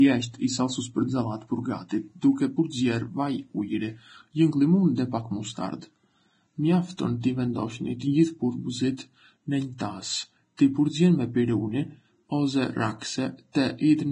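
Throughout the speech, the treble stops dead at 9.7 kHz, and what survives below that edge is grainy and hissy, with sibilants turned to coarse noise and vowels roughened. This is likely Vorbis compression, at heavy damage that fits a very low bitrate near 22 kbps. The codec has discarded the top band and quantised the remaining fine detail so crudely that it comes back as noise. Unlike broadband hiss from a noisy recording chain, this grain follows the signal and vanishes in pauses.

At 6.97 s and again at 10.57 s there is pre-echo: a brief smear of hiss, about 14 ms and 17 ms long, arriving just ahead of a sharp onset, which then sounds softened. The codec spread the noise meant for the loud attack across its whole transform block, including the quiet stretch before it. A click or dropout sits at a single instant, but this noise leads into the attack and fades as the onset arrives.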